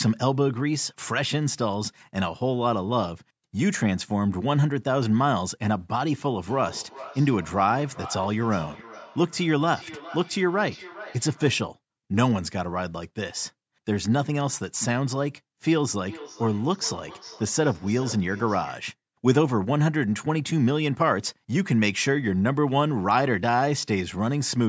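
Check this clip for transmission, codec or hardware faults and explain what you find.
There's a feedback echo between two devices, from 6.49 to 11.69 s and again from 16.06 to 18.94 s. Two devices in the room share the call, one replays the other's mic, and that mic recaptures it. The canceller can't catch that, so repeats come round roughly every 0.4 s, thinning and ringing, peaking about 16 dB and then about 18 dB below the speech.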